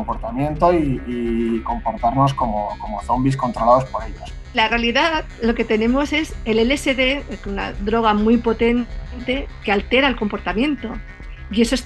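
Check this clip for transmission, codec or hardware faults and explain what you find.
No transmission, codec or hardware faults can be heard anywhere in the audio, which keeps a steady, continuous signal throughout.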